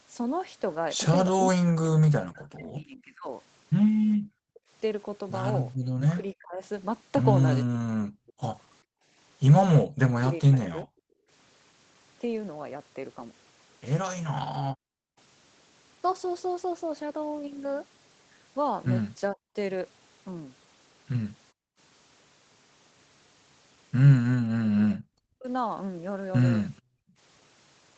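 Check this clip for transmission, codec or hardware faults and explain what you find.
Echo-canceller trouble recurs across the clip: the talker is repeatedly ducked, the room sound is gated, and a faint echo slips through near the end. The audio is band-limited to 8 kHz, consistent with a 20 kbps Opus call path.

Speech suppressed in double talk, 1.37 to 10.88 s (about 3 s affected in total), 19.32 to 19.56 s and 24.86 to 25.47 s: the talker's voice dips, by as much as roughly 40 dB. The likely cause is both ends talking at once. The canceller couldn't tell near-end speech from loudspeaker echo, so it attenuated everything.

Background gated by the echo canceller, 4.17 to 11.3 s (about 0.7 s in total), 14.72 to 15.17 s, 21.52 to 21.78 s and 26.82 to 27.17 s: the room tone suddenly drops out, by about 40 dB in the first three and about 29 dB in the last, then snaps back. While far-end sound played through the loudspeaker, the canceller clamped the microphone down hard and released it once playback stopped.

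Echo leak, 26.76 to 26.82 s: a brief, very faint scrap of repeated sound, some 35 dB below the speech, arrives about 434 ms behind the original. The likely cause is one side playing the call on a loudspeaker while its echo canceller failed to remove all of the pickup, so a delayed remnant was sent back. The gating at 26.82 s follows immediately after.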